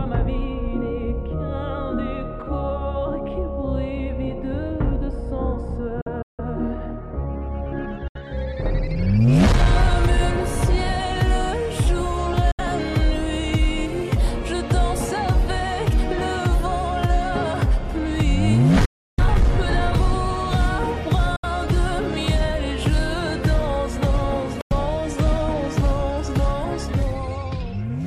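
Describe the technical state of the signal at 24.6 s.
At 24.61 s the sound cuts to silence until 24.73 s. This gap is likely a Bluetooth dropout. Packets reached the headphones too late and were discarded, leaving a hole with abrupt edges or a fade of a few milliseconds. The audio then resumes further along, as if it had kept playing.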